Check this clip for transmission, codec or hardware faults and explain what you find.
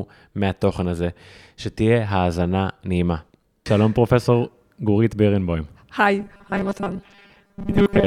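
One fault appears near the end. From 6.20 s to 8.07 s the speech turns into a rigid, metallic 200 Hz buzz: robotic sound from repeated short buffers, likely from audio arriving too seldom, with about half replaced by repeats of the last 5 ms.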